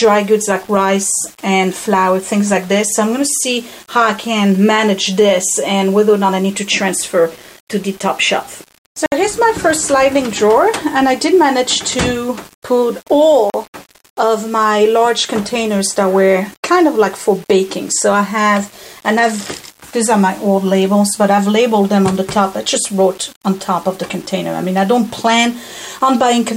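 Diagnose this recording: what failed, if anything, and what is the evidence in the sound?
Grainy, signal-following distortion runs throughout, about 25 dB below the sound. The likely cause is low bit depth without dither at sample-format conversion, consistent with 6-bit rounding.

Blocks of digital silence at 9.06 s (60 ms) and 13.5 s (40 ms) cut in abruptly. The driver or buffer stage likely left output samples unfilled.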